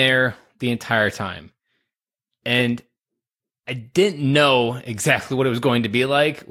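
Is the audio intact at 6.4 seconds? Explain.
Yes, the audio is intact at 6.4 seconds, with no fault present at that moment.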